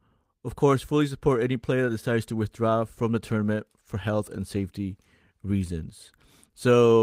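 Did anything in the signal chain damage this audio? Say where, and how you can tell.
No, nothing in the signal chain has audibly damaged this speech recording. At no point does the sound break, shift in character or lose level in a way that any stage of capture, processing, transmission or playback would explain.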